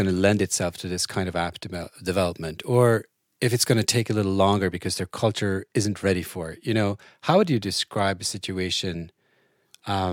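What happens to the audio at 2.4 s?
Pre-emphasis left on, from 1.73 s to 4.01 s, starting right after "this kind of app" and ending just before "a little longer because". The treble was boosted on the way in, and the matching de-emphasis cut never got applied, so the highs sit about 8 dB hot at 10 kHz relative to 1 kHz, which fits the CD 50/15 µs curve. The speech goes thin, bright and sibilant for that stretch.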